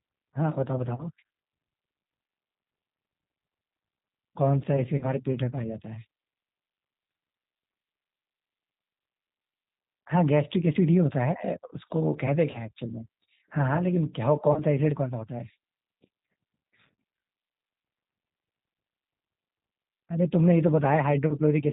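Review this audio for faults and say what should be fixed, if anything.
The G.729 codec runs throughout, with plainly audible damage consistent with 8 kbit/s. Speech is rebuilt from a filter and sparse pulses, so it sounds rough and synthetic, and a spectrogram shows an empty band above 4 kHz. Using a wideband codec such as G.722 or Opus would prevent this.

VoIP packet loss concealed by the speech codec occurs at 0.95–1.04, 4.98–5.08, 12.51–12.62 and 14.53–14.59 s. Each gap fits about 30 ms of lost audio, probably a single packet. The decoder stretched its last pitch and filter into a buzzy tone or coloured noise that fades, and the damage lingers until the frames recover. The waveform shows a smooth, repetitive, decaying stretch. A jitter buffer, forward error correction or a less lossy network path would prevent it.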